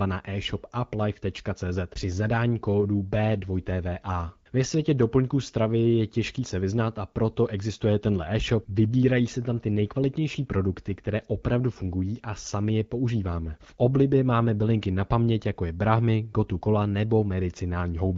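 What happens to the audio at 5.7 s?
Nothing goes wrong at 5.7 s: the speech carries on intact through that moment, coming through the AMR-WB wideband path at 12.65 kbit/s with no dropout, click or other fault.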